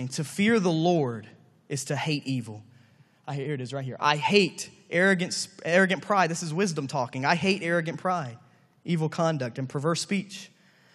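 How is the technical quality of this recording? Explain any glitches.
No glitches or technical faults are audible anywhere in the speech recording.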